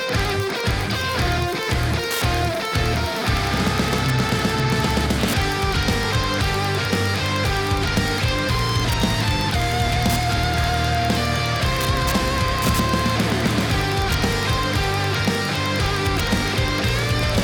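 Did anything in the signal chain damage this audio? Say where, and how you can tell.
Yes, there's Wi-Fi interference in the analogue wiring: steady ticking every 102.4 ms throughout, roughly 20 dB down, from a nearby radio's beacons getting rectified.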